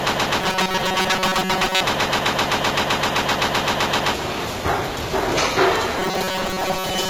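Right from the start, the everyday sounds here are already caught in a broken-record loop. The same piece, about 129 ms long, plays back to back roughly 31 times until 4.14 s. It's most likely a stall that kept resending its last fragment, so whatever should have played there is gone.

On top of that, from 0.42 to 1.83 s the sound goes robotic: a rigid, metallic buzz at 188 Hz. That's the pattern you get from repeated short buffers, likely a stretch of about 5.3 ms replayed over and over while the real audio is skipped. Those repeats fill most of the stretch.

The same robotic buzz comes back at 5.99 s and runs to the end, again at 188 Hz and again only loosely tracking the underlying sound. It points to the same short-buffer repetition, with the real audio dropped in between.

The whole clip also carries plainly audible HE-AAC compression, likely HE-AAC v2 at a low rate around 20 kbps. 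The top end is rebuilt by copying lower bands upward, so harmonics don't line up across the crossover and the treble comes out gritty and metallic.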